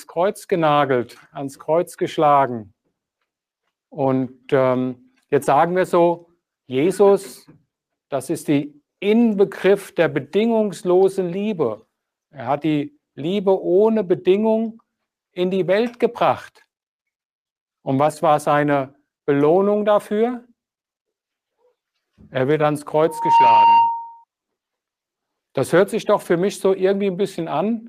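Around 23.07 s a loudspeaker feedback squeal kicks in: a 926 Hz tone swells over about a third of a second to roughly 5 dB above the audio and holds until 24.24 s. The mic's catching its own speaker, and at that frequency the loop gain went past one.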